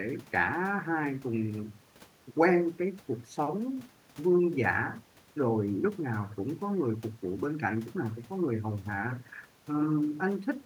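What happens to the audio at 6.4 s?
Nothing goes wrong at 6.4 s; the speech carries straight through that moment with no dropout, glitch or other fault.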